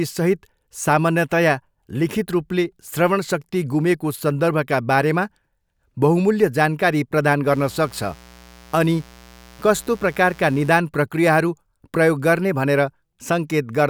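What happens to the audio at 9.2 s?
At 9.2 s the speech is under a mains buzz running from about 7.47 s to 10.73 s, just after "बहुमूल्य जानकारी प्रदान". Interference from the 60 Hz power supply has leaked into the signal path as sharp switching spikes twice per cycle, so harmonics of 60 Hz stack up into the kilohertz range. The result is a steady, raspy buzz sitting roughly 25 dB below the speech.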